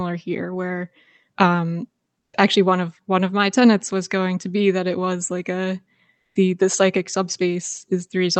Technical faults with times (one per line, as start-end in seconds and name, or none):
2.19-2.33 comfort noise in place of the background
6.17-6.35 comfort noise in place of the background